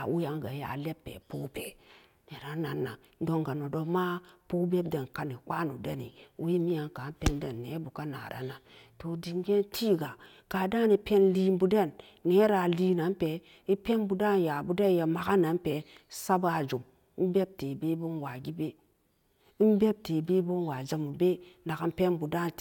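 The speech recording has no technical faults that can be heard anywhere in the signal.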